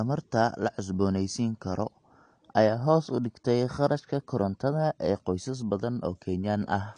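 Speech, and the whole thing carries plainly audible AAC compression damage: nothing above about 9.8 kHz, a dull, smeared top end, and a warbly, fizzy edge on sibilants. That's likely a low-bitrate AAC-LC encode, something around 32 kbps.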